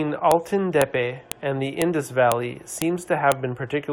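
Sharp snaps land every half second, at 0.31, 0.82, 1.32, 1.82, 2.32, 2.82 and 3.32 s; the ones at 0.82 and 1.32 s come just before "and the", and the 1.82 s one just after it. That's a file header played as audio: half-second speech pieces were joined with their headers left in.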